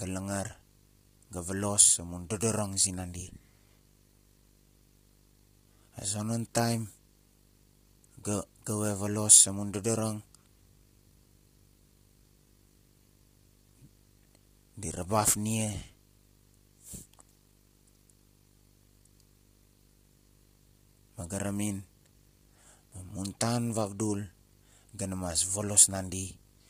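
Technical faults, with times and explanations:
Throughout, video or display buzz: a screen or video cable is coupling into the audio path, laying a 50 Hz buzz at the picture's field rate under the speech with hash above it. A thin whistle sits at 15.6 kHz, the line rate. The buzz runs about 25 dB below the speech.
Throughout, low-delay AAC compression: the speech is likely encoded as AAC-ELD at around 24 kbps. Its short frames resolve pitch harmonics poorly, so the voice sounds rough and grainy with heavy noise filling between harmonics. Nothing is left above 15.5 kHz.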